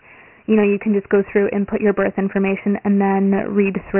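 From start to finish the speech carries Dialogic VOX ADPCM damage. Nothing is left above 3 kHz, and the rate points to 4-bit samples at 6,000 a second. Each step is coded as a coarse difference from the last, so heavy gritty hiss rides on the speech and tracks it. Ordinary telephone coding keeps content up to about 3.4 kHz, and this band ends lower, at 3 kHz.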